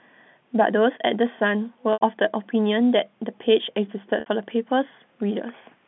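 At 1.93 to 2.01 s and again at 4.20 to 4.26 s, the speech has packet loss with pitch repetition. Audio went missing for 80 ms and then 60 ms, and the receiver bridged each gap by repeating the last pitch cycle. That makes a brief, buzzy held tone that fades, rather than the click or hard silence of a plain dropout. The losses fit runs of 10 ms packets, heard over the narrow telephone band of the G.711 line.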